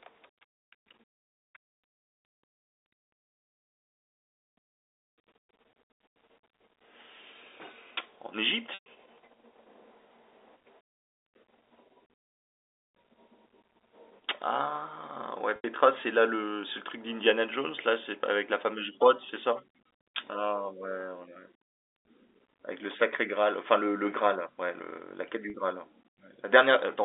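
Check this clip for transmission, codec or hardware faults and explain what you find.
Three brief dropouts interrupt the speech, each from packet loss with pitch repetition, heard over a normal narrowband G.711 telephone line.

At 8.74 s, 15.56 s and 25.50 s, the speech briefly turns into a held, buzzy tone. The first two gaps fade toward silence before the speech cross-fades back, while the last gap is only a buzz. The receiver is repeating the last pitch period to cover lost packets, about 120, 80 and 40 ms of audio, which fits packets of 20 ms each.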